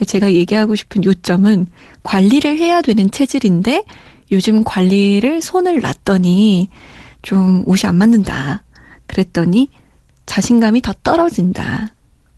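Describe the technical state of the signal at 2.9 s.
At 2.9 s the speech signal is intact, with no dropout, glitch or other fault, and what can be heard is just the ordinary character of the call codec path it has passed through.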